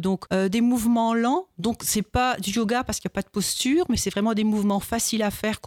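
No technical faults can be heard anywhere here.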